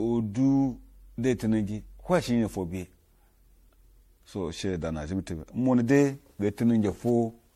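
Swirly, smeared and hollow speech runs throughout, with blurred consonant attacks and nothing above about 16.6 kHz. The likely cause is generation loss: repeated lossy re-encoding, consistent with around seven MP3 passes near 64 kbit/s, each compounding noise and spectral holes.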